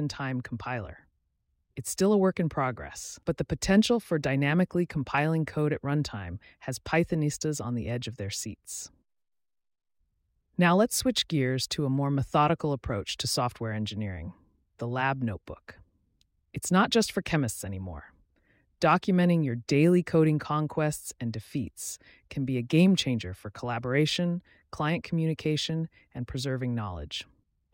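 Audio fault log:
Nothing stood out on listening to this speech recording.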